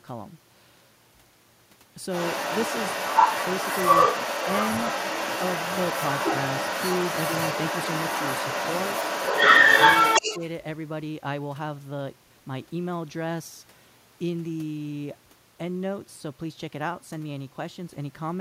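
From 2.1 s to 10.39 s, a second voice runs underneath the talker: the other side's voice leaking through. It is most likely loudspeaker playback reaching the microphone and surviving the echo canceller. It differs from crosstalk or background chatter because it tracks the far end's speech, and it sits at roughly 10 dB relative to the talker's speech.

Just as the leak ends, between 10.2 and 10.41 s, the talker's own speech is suppressed in double talk. The level dips by roughly 10 dB, adding up to about a tenth of a second, while the far-end voice is still present. The likely cause is that the canceller could not tell the talker from the echo and attenuated both. Unlike a network dropout, the dip lines up with the overlap.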